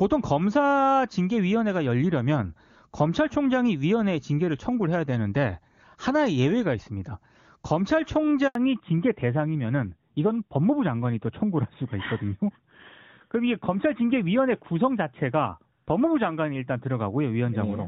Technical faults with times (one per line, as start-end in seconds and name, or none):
8.47-8.55 handover gap
8.55-17.88 fallback to narrowband